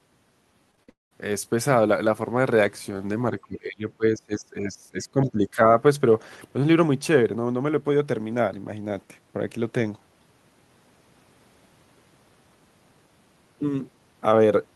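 Short concealed packet loss at 0.71, 0.75 and 0.83 s: the receiver briefly extends the preceding speech over each missing 20 to 40 ms, leaving quick smears. From 0.89 to 1.13 s the audio continues as a fading buzz, then goes silent for roughly 160 ms before resuming without the lost stretch, likely a long network dropout. Between 3.42 and 5.60 s the speech dips, falling by around 20 dB at its deepest, likely speech suppressed in double talk by the echo canceller.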